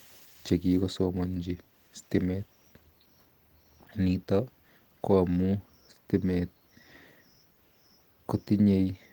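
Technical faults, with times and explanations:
Throughout, Opus voice compression: the speech has the hoarse, faintly robotic grain of a linear-prediction coder whose excitation is coded coarsely. The lower band is modelled as speech, and a thinner layer handles everything above 8 kHz. The top end still reaches about 20 kHz, so it isn't muffled. That points to hybrid mode at a low bitrate, somewhere around 16 kbps.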